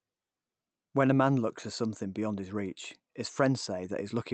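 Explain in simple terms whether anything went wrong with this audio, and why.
Nothing went wrong here: the speech came through an ordinary internet call connection, which trims off the very highest sounds above about 8 kHz, just as such calls normally do, and nothing in it stands out as a problem.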